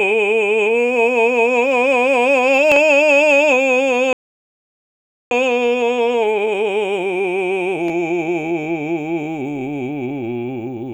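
At 4.13 s the player likely ran out of buffered data or had its output thread blocked, causing a playback stall: the music cuts off mid-flow and stays silent for about 1.18 s, picking up again at 5.31 s where it left off.

From 5.31 to 8.31 s the player works off its backlog through time-compressed catch-up, trimming small pieces and cross-fading the joins. The music runs about 1.25 times too fast while keeping its normal pitch.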